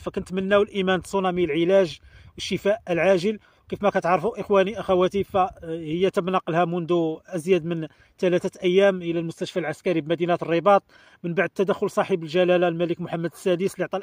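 At about 7.13 to 7.17 s there is a short concealed packet loss: roughly 20 ms of audio failed to reach the decoder in time, and the receiver covered the gap by extending the preceding sound for about 13 ms before blending back into the real signal. The patch is synthesised rather than received, so the sound briefly smears or wobbles across that instant before the true audio resumes.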